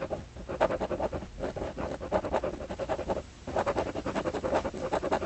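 A recording of everyday sounds that, at 1.55 s, has a skip ahead: about 0.7 s of audio is simply gone, with the two sides joined almost directly and no silence or filler in between. That seamless jump, rather than a gap, separates it from an ordinary dropout. Audio lost on the way, or discarded by a jitter buffer that overflowed, explains it. From 1.74 to 3.15 s a jitter buffer speed-up follows. The sound runs at 110% speed with its pitch unchanged as the receiver trims tiny pitch-period slices, about 0.15 s in total, to shed excess delay. This gradual hurrying, with no single jump, is what separates it from the skip. Throughout, the Opus call path at 32 kbps band-limits the audio to 8 kHz.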